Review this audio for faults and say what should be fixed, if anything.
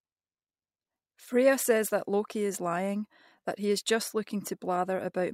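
Nothing to fix: no audible faults anywhere in the speech.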